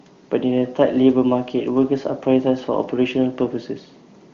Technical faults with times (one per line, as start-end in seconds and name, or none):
none